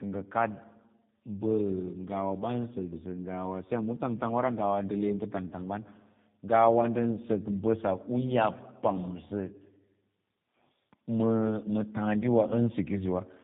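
Speech with tandem speech coding throughout. Two low-rate codecs, likely AMR-NB then G.729A, recoded it, leaving roughness, warble and nothing above 3.7 kHz.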